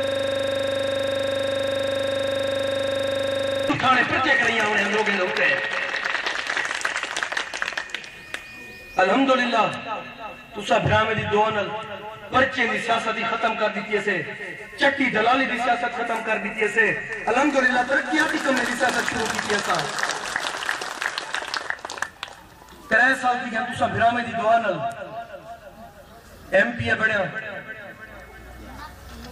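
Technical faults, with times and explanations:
0.00 to 3.70 s, system hang loop: already under way as the clip opens, one 40 ms piece of sound repeats exactly, 91 times at 25 Hz, as the frozen system left the hardware replaying one ring buffer. Identical repeats distinguish it from uneven dropout stutter.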